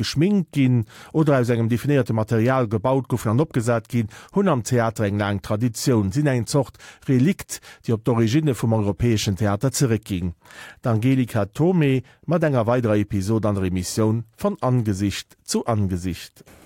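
Just after "mat enger", from 12.84 to 14.49 s, sample clock jitter appears. The converter's clock wanders by under a microsecond, so samples land early or late. A faint roughness, around 50 dB below the speech, rides on loud, bright sounds and disappears in pauses.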